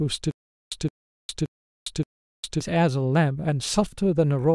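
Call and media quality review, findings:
Stutter with silent gaps, 0.31–2.61 s, speech. A 168 ms burst repeats 4 times, with about 406 ms of digital silence between repeats, every 574 ms. Likely a playback or stream stall: each retry replays the last buffered fragment, then runs dry. Audio due in that span is lost.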